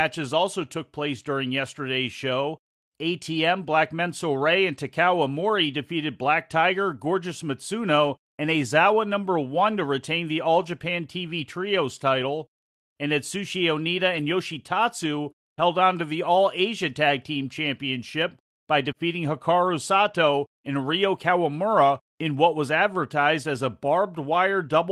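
At 14.15 to 14.21 s, a lost packet was rebuilt from error correction. Low-bitrate backup copies filled the gap, likely two 20 ms packets, so the speech turns briefly rougher and noisier.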